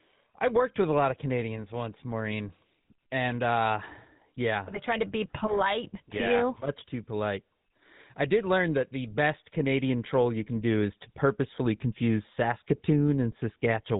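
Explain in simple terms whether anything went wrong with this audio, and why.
The whole clip went through the GSM full-rate codec, which rebuilds speech from coarse pulses, leaving a buzzy, gravelly roughness and nothing above 3.8 kHz.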